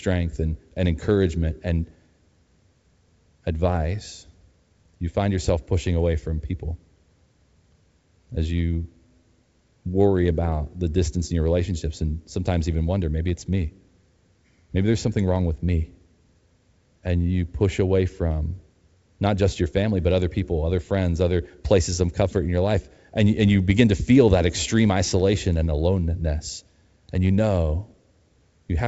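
Nothing technically wrong turns up in this speech recording, which sounds like ordinary wideband telephone audio carried over G.722 coding at 64 kbit/s.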